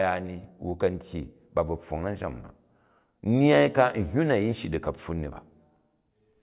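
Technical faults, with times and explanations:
No technical faults can be heard in this recording; the signal stays steady and intact with no dropouts, distortion or interruptions at any point.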